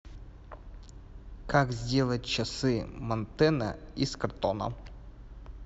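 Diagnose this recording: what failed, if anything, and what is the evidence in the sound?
Nothing failed: the speech carries no audible fault at any stage, so there is no evidence in the sound of anything going wrong.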